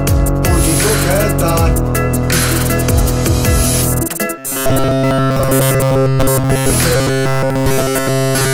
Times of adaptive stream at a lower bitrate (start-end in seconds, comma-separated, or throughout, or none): none